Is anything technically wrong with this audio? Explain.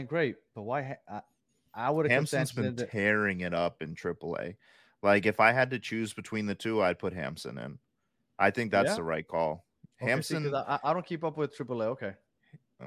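No, nothing technically wrong turns up anywhere in this speech recording, so there's really nothing here to flag.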